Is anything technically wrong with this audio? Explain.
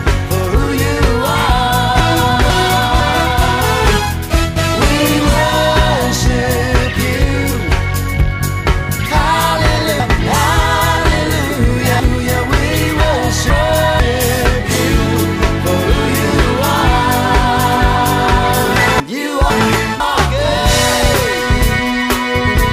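Yes. The audio jumbles briefly at 2.0–3.0 s, 13.0–14.0 s and 19.0–20.0 s, and over a longer stretch at 10.0–12.0 s. These are chunks out of order. A 500 ms block was delivered late and played after its successors, one block late in the short cases and three at 10 s. Nothing is lost, but each swap leaves three hard joins.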